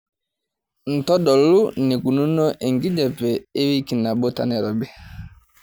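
No technical faults can be heard in this recording.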